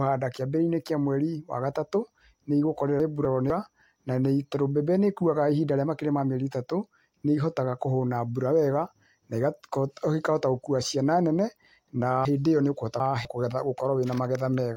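From 3.0 to 3.5 s, just before "na tondũ mbembe nĩĩkuaga", the speech has chunks out of order: a 250 ms block plays one position late, so two pieces swap, leaving a brief jumble at three hard joins. After "nene na", 12.25 to 13.25 s repeats this with a 250 ms chunk three places late. In the waveform and spectrogram, both show abrupt vertical seams where formant tracks and envelopes break off and restart mismatched.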